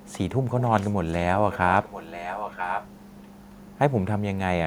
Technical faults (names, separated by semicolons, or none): echo leak